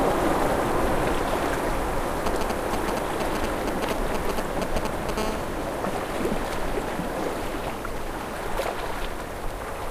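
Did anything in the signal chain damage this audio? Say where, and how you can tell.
Yes. GSM signalling bursts, 2.26 to 5.11 s: galloping ticks and brief 217 Hz buzzes, roughly as loud as the sound, from a nearby phone's radio pulses rectified in the analogue wiring.

GSM phone buzz, 5.18 to 8.48 s: a steady, raspy 217 Hz buzz rich in harmonics, about 14 dB down, from an in-call phone's bursts rectified in the analogue wiring.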